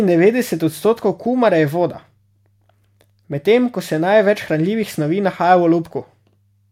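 No technical faults can be heard anywhere in the recording. There is no event that needs a time or an explanation.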